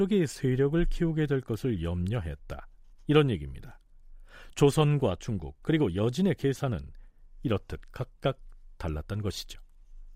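No technical faults can be heard at any point in the recording.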